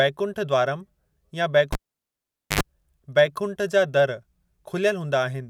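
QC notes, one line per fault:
1.73–2.61 s, cable pulled and plugged in: pop, 0.83 s near silence, 77 ms of 50 Hz buzz, pop; live lead yanked and reseated.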